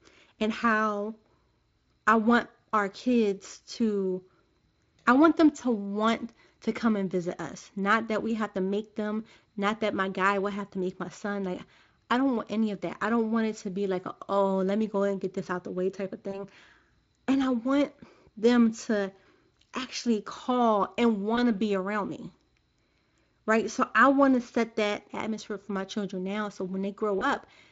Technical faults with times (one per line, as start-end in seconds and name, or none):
16.31-16.35 VoIP packet loss concealed by the speech codec
21.35-21.40 VoIP packet loss concealed by the speech codec
27.19-27.27 VoIP packet loss concealed by the speech codec